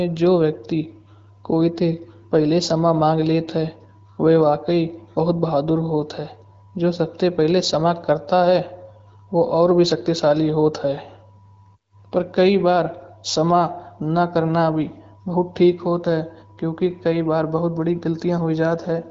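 No technical faults can be heard anywhere in this speech clip. It has passed through the AMR wideband (HD Voice) codec, which shows as a top end that stops at about 7.5 kHz and light coding texture that fits the 12.65 kbit/s rate.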